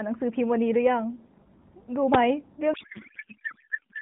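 At 2.14 s a sharp snap cuts across the speech. This is an electrical switching spike, likely a nearby switch arcing into the audio line. From 2.74 s to the end, a codec payload misread takes over. Octet-aligned AMR frames are being parsed as bandwidth-efficient, so the speech turns into garbled, warbling noise.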